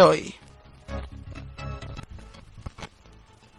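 At about 1.95 to 2.00 s there's damaged data in the compressed stream: the decoder misreads corrupted frames, loses sync, and spits out a short glitch.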